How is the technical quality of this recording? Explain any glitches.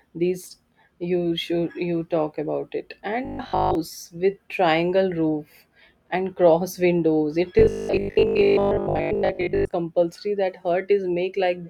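The recording has two stretches of robotic sound from repeated short buffers. The first runs from 3.25 to 3.75 s, between "you talk about it" and "with triangle roof and"; the second runs from 7.59 to 9.73 s. In both, the speech turns into a rigid metallic buzz at 50 Hz that loosely tracks the words. The likely cause is audio arriving too slowly, so a segment of about 20 ms is replayed to fill the gap while most of the real signal is skipped.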